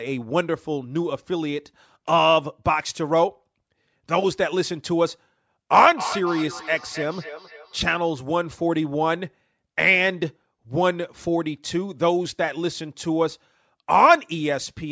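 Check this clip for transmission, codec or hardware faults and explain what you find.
Feedback echo between two devices occurs from 5.96 to 8.02 s. The speech comes round again at an interval of roughly a third of a second. Its loudest repeat sits about 10 dB below the speech. A second device in the room replays this microphone's signal, and the microphone picks it up again. The echo canceller here cannot remove what the other device plays. The call microphone processing is audible too, with nothing above 8 kHz.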